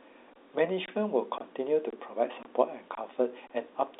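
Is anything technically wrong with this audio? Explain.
Yes, there's a gap between chunks problem in this speech. Short holes of about 23 ms cut in at 0.33, 0.86, 1.38, 1.90, 2.43, 2.95 and 3.47 s, spaced roughly every half second. The audio seems to be delivered in 0.5 s chunks with silence left at each join, probably from padding or a player starting each chunk late. Nothing's lost, but every seam is a short hole in the sound. The G.711 A-law telephone band is audible too, with nothing above 3.8 kHz.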